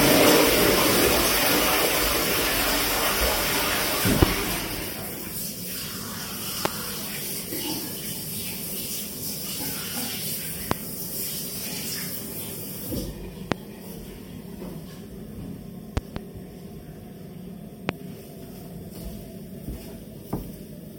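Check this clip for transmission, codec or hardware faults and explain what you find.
Loud pops are audible at 4.22, 6.65, 10.71, 13.52 and 17.89 s, each lasting about 25 ms, plus a double pop from 15.97 to 16.19 s. A sudden voltage step, likely from a plug, switch or static, rides on top of the sound, which continues underneath. The single pops peak about 25 dB above it and the double about 20 dB.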